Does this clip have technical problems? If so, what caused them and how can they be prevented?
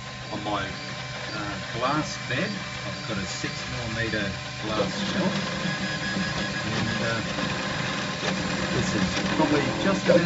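No, there are no technical problems to point to in this clip. Because nothing went wrong, there is no cause to trace and no preventive step to recommend.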